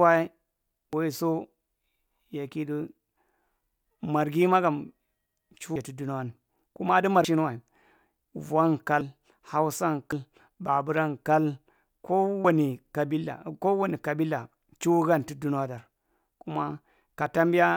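The speech skips ahead at 0.93, 5.76, 7.25, 9.01, 10.12 and 12.45 s, each with roughly 0.1 to 0.2 s missing, likely a dropped buffer (overrun).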